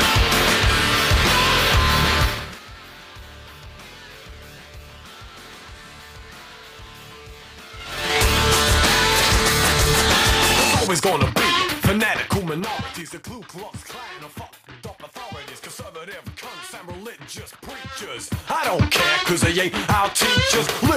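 From 17.83 s to 18.86 s, a level change of around 15 dB is applied in hard 3 dB jumps, about five a second, with no smoothing between them, which produces zipper noise. Each abrupt gain step puts a small discontinuity into the waveform, so the move is heard as a rapid ticking or zipping over the sound rather than a clean fade.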